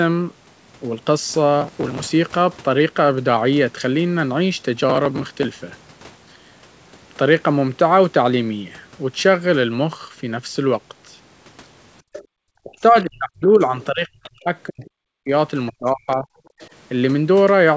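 Right around 12.02 to 12.32 s the room background suddenly sinks, by about 40 dB at its deepest, for something like a fifth of a second in total before it comes back. That's the background gated by the echo canceller. The loudspeaker was playing the far end, so the canceller clamped the mic down hard, and you hear the ambience vanish and then snap back once it lets go.

Inside that dip, from 12.13 to 12.24 s, a faint second voice slips through, roughly 20 dB under the main talker. It's most likely the other side's voice leaking through, meaning the canceller didn't scrub all of the loudspeaker sound out of the mic. The same kind of faint scrap turns up again at 14.23 to 14.3 s, around 25 dB down, and at 16.6 to 16.68 s, around 30 dB down.

Then from 12.62 to 14.5 s the talker's own speech keeps ducking and cutting out in pieces, dropping by up to around 40 dB over about a second and a half. 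It happens again from 14.66 to 15.32 s, also down around 40 dB, and from 15.7 to 16.34 s, around 35 dB down. This sounds like speech suppressed in double talk, most likely with both sides talking at once, so the canceller couldn't tell the talker from the echo and pulled everything down together.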